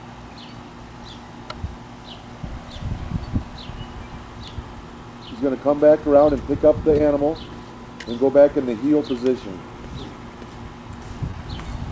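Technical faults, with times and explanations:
6.98–7.01 s and 11.31–11.35 s, short concealed packet loss: each time about 20 ms of audio failed to arrive, which fits one lost packet. The decoder extended the preceding sound to fill the hole and then blended back, so each spot is a brief smear or wobble.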